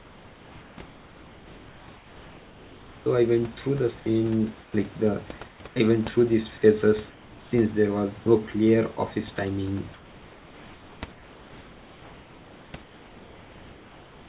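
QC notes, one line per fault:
0.86–3.06 s, 4.62–4.74 s, 5.48–5.76 s, 7.10–7.52 s, and 9.94 s to the end, comfort noise in place of the background: in each pause the room's textured background gives way to a flat, featureless hiss, about 7 dB quieter at 4.62 s and about 3 dB quieter at 7.10 s. This is likely discontinuous transmission: the sender stopped sending during silence and the receiver synthesised noise shaped to the background's rough spectrum and level.
9.36–9.38 s, sound dropped by the voice detector: a brief slice of sound, about 10 ms, vanishes into the same steady noise, leaving a small hole before the sound resumes. The sender's voice detector likely judged that quiet moment to be background, stopped sending, and the receiver filled the 20 ms gap with comfort noise. The telephone-band audio has nothing above 4 kHz.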